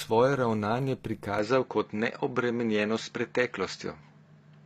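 The speech in this clip has likely been through HE-AAC compression throughout. Only the lower spectrum carries real coded detail, and the treble is rebuilt by copying lower bands upward under a coarse envelope. The result is a top end that reaches high but does not match the original harmonics, so s sounds come out gritty and metallic. Nothing is present above 14.9 kHz, and the plainly audible damage points to a low bitrate in the region of 24 kbps. At 1.39 s the input likely switched to a poorer device and stays on it to the end, with no gap at the changeover. From that moment the band stops at 7.6 kHz, so the sound turns duller and boxier. The level shifts by about 5 dB, and a faint new noise floor appears, roughly 50 dB below the speech.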